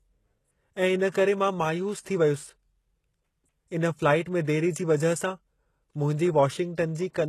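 Throughout, the speech sounds like likely HE-AAC compression. The treble is rebuilt and stops at 12.3 kHz, so s sounds turn gritty and metallic. The damage is plain and fits a very low bitrate near 16 kbps.

Pre-echo appears at 1.12 to 1.14 s before "करे मां मायूस थी", at 4.45 to 4.47 s before "देरी जी वजह सां", and at 6.75 to 6.78 s. Quantisation noise spreads about 23 to 27 ms ahead of each attack. It sounds like a brief hiss, and the onsets are smeared.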